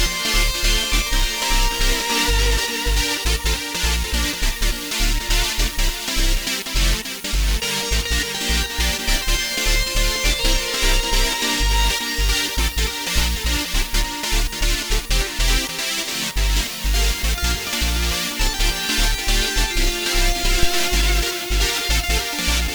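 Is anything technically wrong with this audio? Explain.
Yes. From 20.63 to 21.03 s a deep thump hits at about -6 dBFS and dies away over roughly 91 ms. This is a phantom power thump: a supply switched on a live input sends a voltage step through the coupling capacitors.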